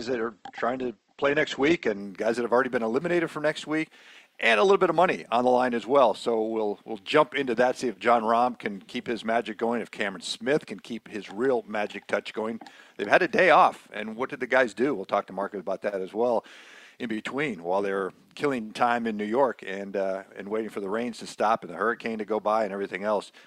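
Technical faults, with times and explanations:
0.0–2.0 s, adaptive stream starting at a low bitrate: the player opened on a lean version of the stream so playback could begin at once, then switched to a richer one after gauging the connection. For those first two seconds nothing sounds above about 8.2 kHz and coding artefacts are more prominent, which fits a stream near 16 kbit/s. At 2.0 s the treble and detail return abruptly, without any gap, consistent with a step up to around 64 kbit/s.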